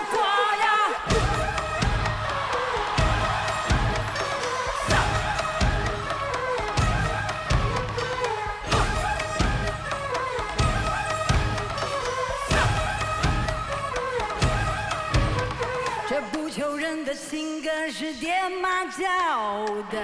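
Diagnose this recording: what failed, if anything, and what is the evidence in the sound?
Nothing failed; no fault is audible anywhere.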